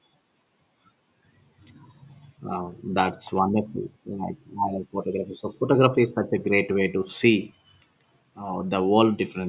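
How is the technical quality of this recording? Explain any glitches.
No audible glitches or faults.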